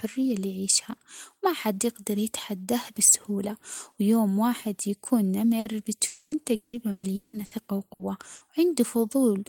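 A burst of packet loss hits at 5.59 to 5.68 s, right after "بسهولة ويوم واحد يكون". About 60 ms of the last sound is stretched and faded out, and the speech resumes with roughly 60 ms skipped.

From 6.07 to 6.34 s a network dropout, likely a long stall in delivery, leaves about 240 ms never played. The receiver stretches the last sound across the entire gap, fading it, with no silence before speech returns further on.

Repeated packet loss makes the stretch from 6.55 to 7.54 s choppy. Four separate holes, the longest about 180 ms, are each patched by continuing the preceding sound, so about 55 percent of that second is synthetic fill and 540 ms of speech is missing.

Two more bursts of packet loss follow at 7.93 to 8.02 s and 8.35 to 8.44 s. Each one conceals about 60 ms by briefly continuing and fading the last sound and drops the same amount of speech.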